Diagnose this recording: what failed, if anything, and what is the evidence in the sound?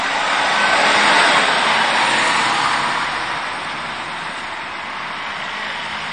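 The whole recording sounds watery and swirly, with a metallic, chirping edge on bright, hissy parts and transients that smear instead of landing crisply. Nothing is heard above 10.2 kHz, a hard treble ceiling throughout. This points to the codec stage, likely MP3 compression at a low bitrate, around 48 kbps. Starved of bits, the encoder lops off the top band and drops quieter frequency lines that flicker in and out between frames, producing the swirl and chirps.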